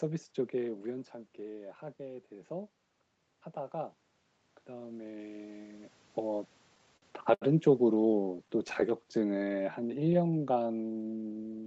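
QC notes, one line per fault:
4.66–6.49 s, automatic gain rising: The automatic gain control judged the input too quiet and raised its gain by about 3 dB, spreading the increase over nearly two seconds. Because the whole signal is lifted, the voice and the room noise behind it swell together. A talker movement around 5.5 s falls inside this span, but the shared rise in the background marks the gain change.
6.75–7.43 s and 7.95–8.93 s, repeated stalls (stutter): Packets kept arriving late, so the jitter buffer repeatedly ran dry, and the receiver extended the last sound each time until data returned. The first run has five stalls totalling 153 ms, the longest 75 ms, with about 22% of the span concealed. The second has thirteen short stalls of 14 ms or less, 130 ms in all, about 13% concealed. Nothing is lost, but the audio drags and stutters.
8.97–11.67 s, jitter buffer slow-down: With its reserve low, the jitter buffer rebuilt it by repeating single pitch periods and slivers of pauses many times over. 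It adds 364 ms in total, so the audio plays at about 87% of normal speed right to the end. Pitch stays unchanged while sounds are stretched and drawn out, which can leave a slight warble.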